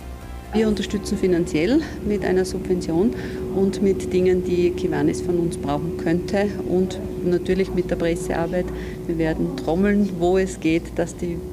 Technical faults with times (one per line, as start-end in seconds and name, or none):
0.00-11.53 video or display buzz